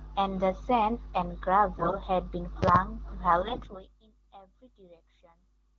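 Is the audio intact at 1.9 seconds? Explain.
No. From 1.76 to 1.96 s the speech carries AMR bit errors, a stretch that fits about ten consecutive 20 ms AMR-WB frames. Around a tenth of the less protected bits in those frames arrived flipped while the checksum on the critical bits still passed, so the decoder placed excitation pulses wrongly and used skewed pitch, gain and spectral values. Pitch and level hold roughly steady, but the voice turns hoarse, scratchy and gargly for that fifth of a second.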